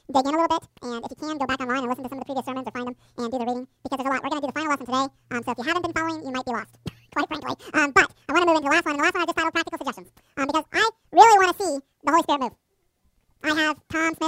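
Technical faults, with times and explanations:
Throughout, audio read two samples at a time (double speed): each pair of samples is treated as one frame, as though the data were two-channel or wider, so the sound plays at 2x speed, a full octave (12 semitones) higher.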